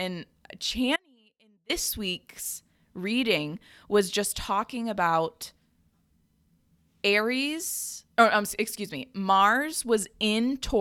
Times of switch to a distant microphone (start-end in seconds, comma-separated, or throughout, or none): none